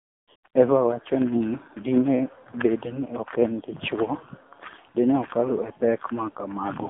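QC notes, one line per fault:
Throughout: AMR narrowband mobile codec. The sound is plainly buzzy and synthetic, and its band runs only from about 200 Hz to 3.5 kHz, so it is thin and muffled at both ends. The codec samples at 8 kHz and rebuilds each 20 ms frame from a vocal-tract model excited by a few pulses. At the low rate this damage points to, around 7.4 kbps, too few pulses remain to carry natural detail.
0.00–0.28 s, 0.36–0.44 s, 0.48–0.54 s: AMR comfort noise. In these gaps the background turns into a smooth, even hiss that switches on and off rather than continuing naturally. The longest gap is the opening 0.28 s, and the later two last 80 ms and 60 ms. In each gap the sender judged the line silent and stopped sending speech frames. The receiver then generated synthetic noise from a coarse level-and-spectrum description in place of the real background.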